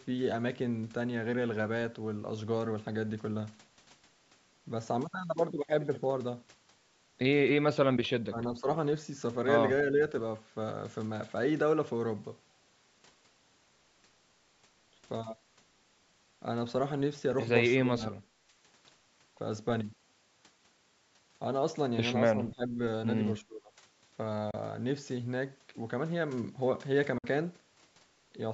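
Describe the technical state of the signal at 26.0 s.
At 26.0 s the speech is intact, with no fault: only the normal call microphone processing is present, trimming the lowest bass and leaving nothing above 8 kHz.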